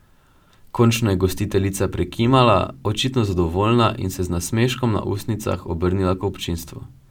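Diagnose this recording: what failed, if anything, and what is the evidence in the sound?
Nothing in this speech recording points to a failure at any stage of the chain. There is no audible event to pin to a time or trace to a mechanism, so there is nothing to diagnose.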